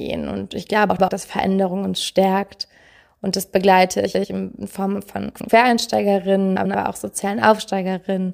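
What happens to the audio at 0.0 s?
Nothing goes wrong at 0.0 s; the audio is intact there, with no dropout, click or distortion.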